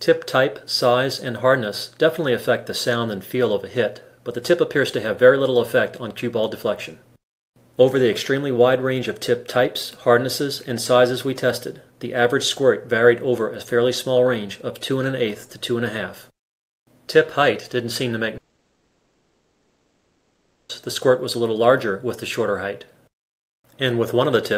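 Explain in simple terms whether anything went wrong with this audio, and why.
Something did go wrong, from 18.37 to 20.71 seconds. The sound turns into a fading buzz, then goes quiet, and picks up later with a gap of about 2.3 seconds missing. The likely cause is a long network dropout.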